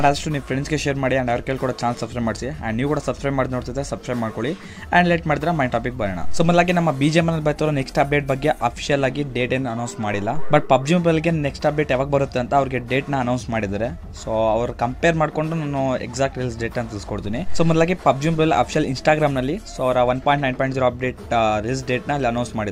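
No technical faults can be heard at any point in the clip, so there is nothing to place in time order.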